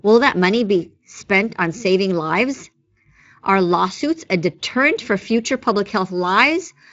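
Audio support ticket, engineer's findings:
No faults found.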